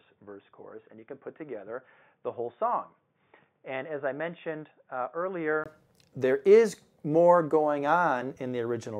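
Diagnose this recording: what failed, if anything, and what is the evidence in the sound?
The first 5.66 s sound dull and boxy, with nothing above 3.6 kHz, and the level sits about 10 dB lower, over a faint background noise of its own, roughly 50 dB down. At 5.66 s a 20 ms silence is followed by full bandwidth, normal level and a different noise floor. This is most likely an input switched to a poorer device, a driver-level change of capture source. A codec band limit would not shift level, tone and noise together at one instant across a gap.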